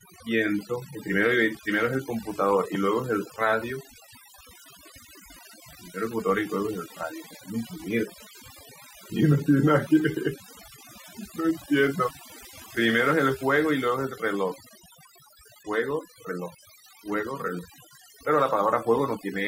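Overdone noise removal runs throughout: bands near the estimated noise floor are cut hard, leaving twinkling specks in near-silent gaps.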